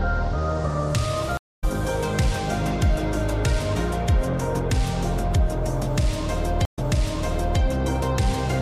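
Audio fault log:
1.37–1.64 s, stream reconnect: the connection drops, leaving about 0.21 s of silence, and a fresh decoder picks up roughly a fifth of a second later in the stream, so a small chunk is just gone.
6.65–7.60 s, stream reconnect: a shorter 80 ms gap, but here the server resends a burst and playback restarts 0.86 s earlier, so you hear that stretch of sound a second time.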